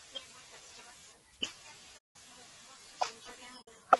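A short speech recording carries plainly audible low-delay AAC compression throughout, likely AAC-ELD at a low rate around 32 kbps. At this low bitrate the voice sounds rough and grainy; a spectrogram shows noise filling the gaps between harmonic lines and a thin, synthetic-looking upper band. AAC frame loss with muting opens two soft-edged holes, from 1.97 to 2.16 s (about 180 ms) and from 3.61 to 3.68 s (60 ms). The decoder zeroed the missing spectra, so the waveform tapers smoothly to silence and back, leaving blank vertical strips on the spectrogram.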